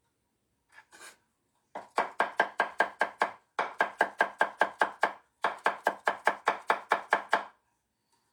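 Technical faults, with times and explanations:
Throughout, low-bitrate audio saved at a high bitrate: the everyday sounds carry the smeared, thinned detail of a heavily compressed encode, even though the file is an MP3 whose size points to about 256 kbit/s. The likely cause is an earlier pass through a low-rate codec, consistent with HE-AAC near 48 kbit/s, followed by re-encoding. The later, generous encode faithfully preserves what reached it, so the detail discarded in the first pass stays missing.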